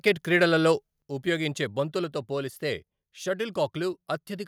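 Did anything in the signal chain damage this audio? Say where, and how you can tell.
Yes. Microphone overload occurs at the converter stage. From 0.07 to 0.09 s a loud peak has its top flattened, leaving a harsh crackle. The input was likely about 2 dB over full scale, so a small share of samples hit the limit and were cut square.

Microphone volume stepped down in call processing. At 1.02 s the speech and the background fall together by about 6 dB in a single step. This is likely the call software reacting to the clipped peak and lowering the device's input gain at once.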